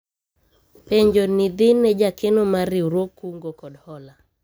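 Zipper noise runs from 2.95 to 3.32 s in this speech clip, a fast ticking laid over the sound as the level drops by about 10 dB. The gain is not ramped but moved in 1 dB jumps, roughly forty times a second, and each jump puts a small discontinuity into the waveform that is heard as a click. Strung together over those few tenths of a second, the clicks form the zipping texture.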